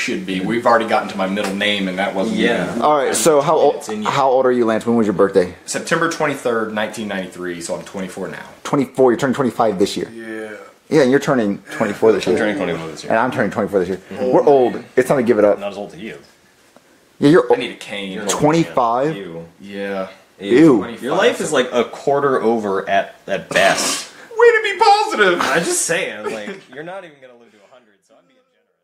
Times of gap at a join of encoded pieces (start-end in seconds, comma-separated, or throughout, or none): none